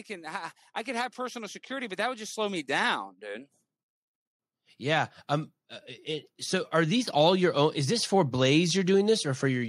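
Automatic gain rising runs from 0.07 to 3.5 s and again from 4.78 to 8.17 s. In each stretch the gain control judged the incoming speech too quiet and pushed its gain up step by step, by about 7 dB the first time and about 4 dB the second. The talker and the room noise behind them swell together over roughly three and a half seconds, so the level creeps upward rather than jumping.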